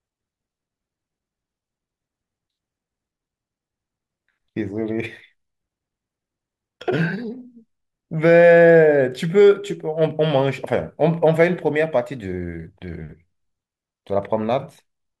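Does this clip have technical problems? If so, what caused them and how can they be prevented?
No, no technical faults heard.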